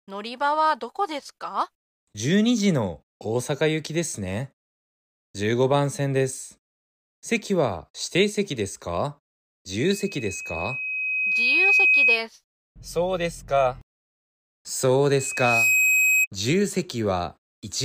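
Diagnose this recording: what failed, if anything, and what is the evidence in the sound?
What failed is the acoustic loop on the analogue side, where the mic hears its own loudspeaker. This is loudspeaker feedback squeal: a steady 2.5 kHz tone swells from 9.72 to 12.21 s, right after "席ですか" and ending before "すそうで", taking about two seconds to build. It returns at the same pitch from 15.13 to 16.27 s, after "そう" and before "自由", ramping in roughly half a second. Both peak about 5 dB over the speech, and because the tone grows by itself, loop gain at that frequency exceeded one.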